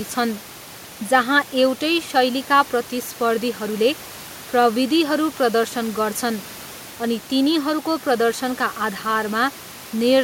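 No technical faults occur at any point in this speech, and the faint room noise sits about 22 dB below the talking.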